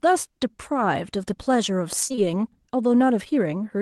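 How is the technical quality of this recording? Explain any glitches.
The recording has one cluster of glitches, with the call codec's top end limited to about 12 kHz. Short concealed packet loss hits three back-to-back spots at 2.07, 2.12 and 2.15 s, ending near 2.19 s. Each lost roughly 20 ms, and the receiver stretched the preceding sound to cover it before blending back. Unlike a plain dropout, there's no silent gap, just a brief smeared wobble.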